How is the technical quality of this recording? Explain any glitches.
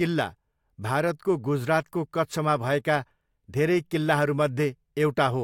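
The recording has no technical glitches anywhere in the signal.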